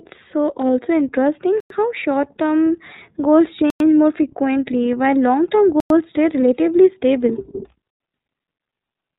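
Throughout, the speech carries plainly audible iLBC codec damage. Nothing above 4 kHz survives, so it sounds narrowband. Each frame is coded on its own, which leaves a rough, synthetic edge. The texture fits 30 ms frames at the 13.33 kbps mode.

A gap between chunks cuts in four times, each 100 ms of hard-edged silence. The first runs from 1.60 to 1.70 s, after "so also interesting" and before "how short term goals". The second spans 3.70 to 3.80 s, just before "more frequently while long". The third falls at 5.80 to 5.90 s, after "frequently while long term". The last is at 7.90 to 8.00 s. The holes come every 2.1 s, which points to audio delivered in 2 s chunks with silence left at each join.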